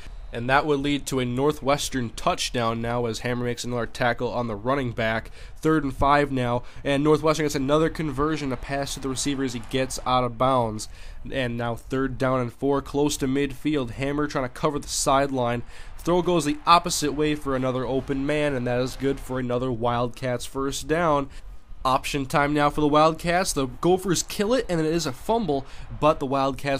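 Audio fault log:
No audible faults detected.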